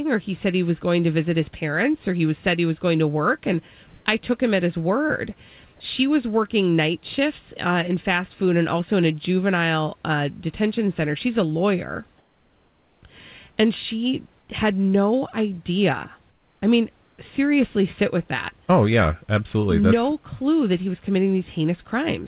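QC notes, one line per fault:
3.88–4.06 s, 12.18–13.02 s, 16.3–16.62 s, 17.04–17.18 s, comfort noise in place of the background: in these pauses the room background, about 40 dB below the loud parts, becomes flat, featureless hiss, about 7 dB louder in the first gap and about 1 to 4 dB quieter in the others. The likely cause is discontinuous transmission, with the receiver synthesising noise in the gaps. Unlike a noise gate, the pauses never fall silent. Unlike a dropout, the filler is steady noise, and it stays within the call path's band, with nothing above 4 kHz.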